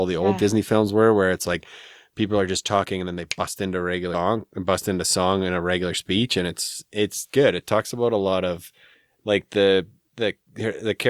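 A speech clip with one audible skip at 4.14 s, between "they bust into a" and "and bust into song": about a fifth of a second of sound is gone, and the two sides butt straight together. This is audio missing between chunks, likely from the recorder losing a short piece while closing one 5-second chunk and opening the next. Unlike a dropout, which leaves a silent gap, nothing fills the hole, so the sound jumps forward rather than pausing.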